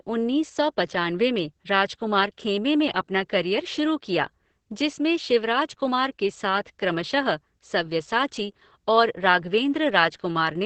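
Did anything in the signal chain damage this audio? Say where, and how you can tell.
Yes. From start to finish the speech sounds muffled, hoarse and faintly robotic, with nothing above about 8 kHz. That points to the codec stage: heavy Opus voice compression in its SILK mode. SILK models speech with linear prediction and, starved of bits, quantises the excitation crudely while limiting the band to wideband, which fits a bitrate of around 10 kbps.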